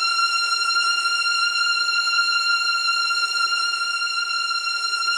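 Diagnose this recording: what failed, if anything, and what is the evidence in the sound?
Nothing failed in this recording, and the sound gives no evidence of a fault at any stage.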